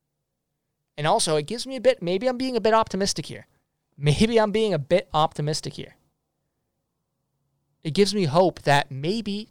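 Hard clipping strikes three times. At 2.74 to 2.79 s and 5.18 to 5.23 s, just after "I'm being a bit", peaks exceed the stage's limit by about 1 dB. Their flattened tops crackle briefly. From 8.00 to 8.80 s, about 5 dB of overload squares off every peak. The added high harmonics turn it into harsh fuzz.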